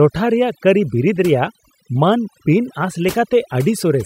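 From the start to the end, there's overdone noise removal: the noise reduction was pushed too hard, so bands near the noise estimate get dropped, taking quiet bits of speech along. The background drops and breaks into twinkly specks.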